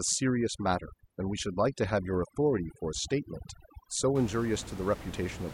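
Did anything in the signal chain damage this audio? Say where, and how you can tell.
Yes, overdone noise removal in the call processing, 0.00 to 4.15 s: the room noise, only about 14 dB under the speech, gets gated into twinkly near-silence, and quiet parts of the voice go with it.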